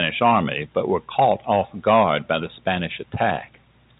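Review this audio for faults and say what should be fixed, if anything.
Nothing here needs fixing.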